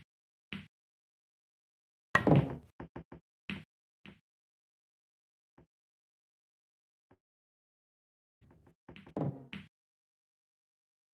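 The audio breaks off at 7.13 s in what is likely a long network dropout: the last sound smears into a short fading buzz or hiss, then about 1.25 s of silence follows, and playback resumes at 8.43 s. Roughly 1.3 s of material never arrives, so the return picks up later in the stream rather than where it stopped.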